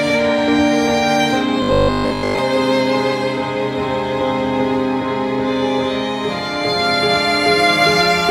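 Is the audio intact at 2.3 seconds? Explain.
No: robotic sound from repeated short buffers runs 1.63 to 2.39 s, likely from audio arriving too seldom, so 20 ms chunks repeat, forcing a rigid 50 Hz buzz onto most of the music.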